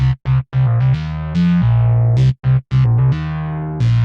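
No technical faults can be heard in this recording of everyday sounds. There is nothing to note on the technical side.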